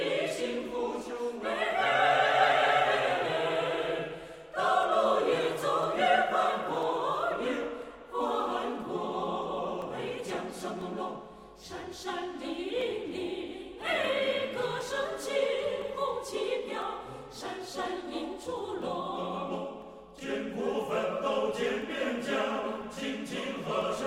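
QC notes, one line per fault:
3.83–23.82 s, periodic USB or driver dropouts: a tick every 1.0 s, about twenty in all, as the driver stalls and a couple of milliseconds of audio become silence. The waveform shows brief flat gaps, and the spectrogram shows thin, evenly spaced broadband vertical lines.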